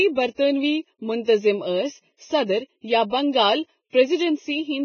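Across the whole speech clip the sound is hollow and phasey, with a fixed dip in the upper midrange. That is channel delay (comb filtering): one channel lags the other by a fraction of a millisecond, so summing them cancels evenly spaced frequencies starting around 1.5 kHz.

The speech is also hissy and grainy throughout, with roughened tones, smeared consonant attacks, and nothing above 6.6 kHz. The likely cause is heavy Vorbis compression at a very low bitrate, roughly 14 kbps, where coarse treble quantisation turns fine detail into noise.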